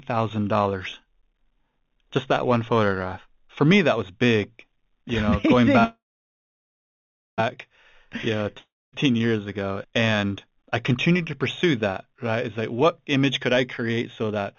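At 5.84 s, right after "know going", the speech stops and the last sound smears into a fading buzz, then about 1.39 s of near silence, and the talk resumes at 7.40 s. This is a call audio freeze, likely from packets held up in transit so the jitter buffer ran dry. Unlike a dropout, nothing is lost: the speech picks up exactly where it stopped, so about 1.54 s of gap has simply been inserted and everything after it runs that much later.

From 8.59 to 8.95 s, just before "years ago and I", there is a shorter break of the same character: a brief fading continuation of the last sound, then about 0.25 s of silence. This is a long network dropout, likely audio that never arrived. What sets it apart from the freeze is that when speech returns, about 0.34 s of it is gone, so the sentence jumps ahead rather than carrying on from where it broke off.

From 13.82 to 14.55 s, after "what image could I", the speech suddenly sounds hurried, running at about 109% speed while its pitch stays exactly the same. 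This is a jitter buffer speed-up. The receiver was holding more audio than it needed and trimmed about 70 ms in tiny slices of one or a few pitch periods to catch up. A simple faster playback would raise the pitch; here only the timing tightens.

Throughout, the narrow call-band sound with nothing above 4 kHz fits a G.711 mu-law call path.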